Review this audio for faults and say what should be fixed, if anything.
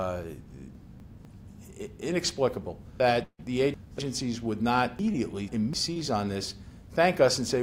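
Chunks out of order occur at 0.75 to 1.25 s, 3.0 to 3.99 s and 4.99 to 5.73 s. Each 250 ms block plays one, three and two chunks late, so the audio jumps at the hard joins. Unlike a dropout, nothing is missing. The writer should reassemble blocks by sequence number before output.

From 3.23 to 3.41 s the sound keeps sustaining as a fading buzz for about 150 ms, then goes silent for about 60 ms, and 160 ms of audio never returns. The likely cause is a long network dropout. It is longer than concealed loss and ends in true silence. A larger jitter buffer or redundant transmission would prevent it.

Short concealed packet loss occurs at 5.13 to 5.16 s. About 20 ms failed to arrive, and roughly 13 ms of extrapolated sound bridges the gap, leaving a brief smear or wobble. Unlike the dropout, there is no fade to silence. Forward error correction would cover such losses.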